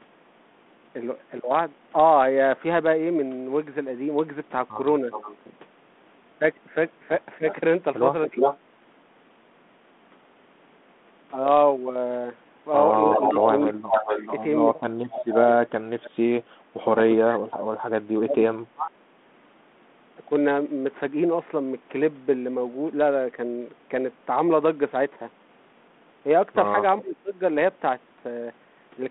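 At 5.12 to 5.36 s a faint repeat of the speech trails it by 360 ms, well below the talker. This is an echo leak, likely a speakerphone's echo canceller letting its own pickup back into the line. It returns far louder from 7.49 to 8.58 s, as loud as the speech, and again from 13.12 to 14.36 s at a 431 ms delay.

Overlapping these, from 7.38 to 8.36 s the talker briefly dips by around 15 dB. From 13.07 to 16.18 s and from 17.26 to 19.08 s the speech is cut in pieces, dropping by up to around 30 dB for about a second or more in total. At 27.01 to 27.36 s it dips by around 20 dB. This is speech suppressed in double talk: likely with both ends active, the canceller turns the near talker down along with the echo. All of this sits within the narrow 32 kbit/s G.726 telephone band, which adds only light coding damage.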